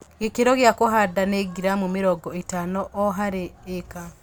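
Nothing here sounds broken: the speech comes through steady and intact, with no technical faults to point to at any moment.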